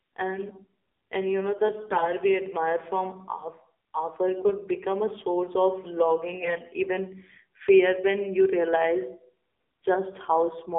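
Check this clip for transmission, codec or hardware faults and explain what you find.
Two faults are present: narrowband mobile coding across the whole recording, and three short bursts of corrupted frames.

Throughout, the speech carries AMR narrowband mobile codec damage. Its band runs about 300 Hz to 3.7 kHz, and its buzzy, synthetic texture fits a low mode near 7.4 kbps. That texture, not just dullness, separates it from simple filtering.

At 1.80 to 2.12 s, 4.32 to 4.53 s and 6.40 to 6.61 s, AMR bit errors flip weakly protected bits. The speech turns hoarse and gargly but keeps its pitch and level, unlike dropouts or gaps. The 6.40 s burst sounds worst.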